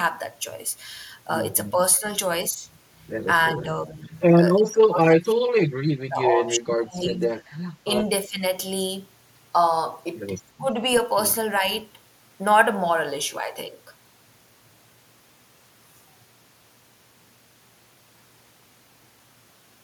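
Speech dips in level at 1.73–2.03 s, 3.53–4.12 s, 4.57–5.62 s, 5.96–8.44 s and 10.59–10.81 s, from a slight sag to a near-dropout deepest around 4.57–5.62 s, likely speech suppressed in double talk, where an echo canceller could not separate this side's voice from overlapping far-end echo and turned both down. Waveform and spectrogram show matching notches.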